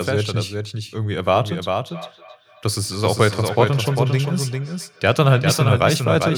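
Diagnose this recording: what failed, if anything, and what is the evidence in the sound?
A doubled audio track runs throughout. A full-band copy trails the speech by roughly 400 ms, about 5 dB quieter, with no room colour. A second, slower capture path is the likely cause.

Feedback echo between two devices appears from 1.87 to 5.71 s. Speech returns at roughly 300 ms intervals, thinning each time, at most about 18 dB below the speech. This is a call-processing fault: two devices share a room, and neither echo canceller removes the other's playback.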